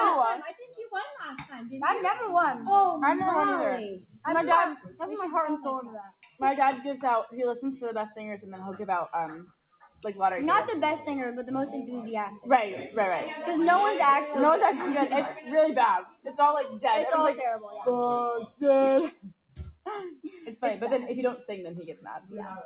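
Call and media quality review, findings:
Continuous pumping and flutter across the clip: held tones and tails sink while attacks pass, level swinging by roughly 5 dB. Noise suppressor applied to music or sounds. A speech-tuned suppressor is reading steady content and ambience as noise.

Sudden drops on sustained sound at 0.53, 4.02, 4.77, 6.08, 9.46, 16.05, 19.11 and 21.96 s, each 0.2–0.4 s, about 8 to 18 dB deep. Sound cut by the noise suppressor: decays chopped short, onsets intact. Band-limited at 4 kHz, fits G.711 A-law.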